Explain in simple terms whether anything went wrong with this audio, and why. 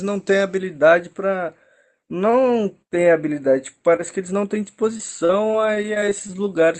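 From 0.58 s to the end, channel delay (comb filtering) is present: one side arrives a fraction of a millisecond late and, mixed with the other, cancels certain frequencies, the first around 5 kHz, so the speech sounds hollow and slightly dull.

Between 4.97 and 6.31 s, repeated packet loss (robotic sound) strikes. Chunks of the call's data went missing about ten times, each patched by stretching the last sound, leaving choppy speech with gaps up to 36 ms.

From 5.79 to 6.66 s, a jitter buffer slow-down follows. The receiver ran low on audio or raised its target delay, and repeated tiny pieces to build up a reserve, so speech plays at about 92% speed, drawn out but at unchanged pitch.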